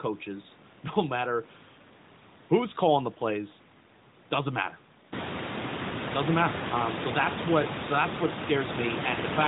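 Nothing in this speech stood out as a fault on listening.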